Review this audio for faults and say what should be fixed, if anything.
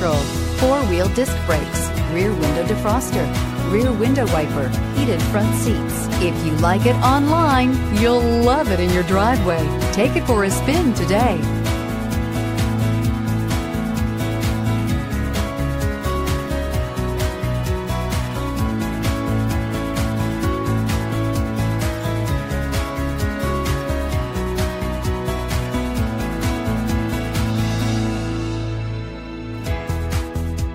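No faults; nothing needs fixing.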